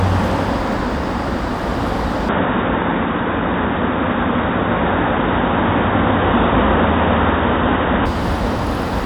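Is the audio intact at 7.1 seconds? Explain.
No. From 2.29 to 8.06 s the sound turns dull and boxy, with nothing above 3.8 kHz, a level shift of around 5 dB, and a fresh noise floor well below the signal. This is likely an input switched to a poorer device, changing over without any gap.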